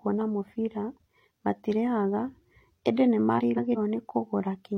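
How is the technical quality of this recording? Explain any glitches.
The recording has one glitch, frames out of order, from 3.38 to 3.77 s. Two adjacent blocks of about 0.19 s each swapped places and were decoded that way. The speech there turns into a garbled flutter. No time is lost.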